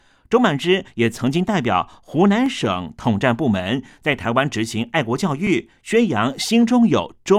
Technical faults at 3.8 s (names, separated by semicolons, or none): none